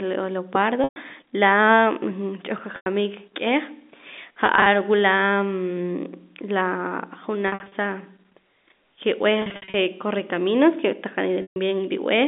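Packet loss with pitch repetition hits six times in this speech: 0.84 to 0.96 s, 2.76 to 2.86 s, 4.46 to 4.66 s, 7.48 to 7.72 s, 9.42 to 9.74 s and 11.42 to 11.56 s. The receiver loops the last pitch period to cover each hole, so the 100 to 140 ms gaps sound like a held, buzzy tone fading away. The 4.46 s one is scattered 20 ms dropouts, fitting 20 ms packets, and the next two have runs up to 60 ms. All of it rides over the narrow telephone band of the G.711 line.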